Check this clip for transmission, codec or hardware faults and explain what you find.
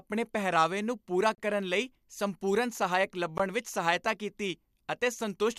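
The speech was encoded as separate pieces, about 2 s long, and joined without trimming, which leaves a gap at a join of encoded pieces twice. Each encoder pass prepends its start-up delay and pads its final frame, and that silence survives at the seams. At 1.35 to 1.38 s, right after "ਪਹਿਰਾਵੇ ਨੂੰ ਪੂਰਾ", the speech drops out for about 31 ms. At 3.38 s, just before "ਵਿੱਚ ਸਹਾਇਤਾ ਕੀਤੀ", a shorter 16 ms hole appears. Both are dropouts with smeared edges, after which the speech resumes exactly where it stopped.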